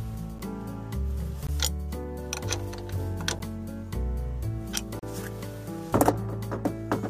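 Blocks of digital silence occur at 0.39, 1.47, 3.39 and 4.99 to 5.03 s. Each time, the output buffer was likely not filled, so the sound drops abruptly to silence. The two short gaps, 8 and 12 ms (the 3.39 s one fits a 512-sample buffer), click like ticks. The 19 ms and 35 ms gaps pop as brief holes.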